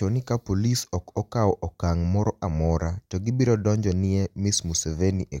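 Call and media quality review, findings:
Nothing stood out on listening to the speech.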